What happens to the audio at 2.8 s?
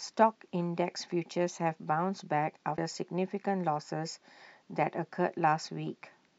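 A broken MP3 bit reservoir is the likely cause of the glitch from 2.76 to 2.78 s, where the speech skips forward. MP3 frames can store part of their data in the spare space of earlier frames. When a frame goes missing, the next one reaches back and decodes bytes belonging to another frame. The disturbance lasts about 26 ms, which fits the length of a single MP3 frame.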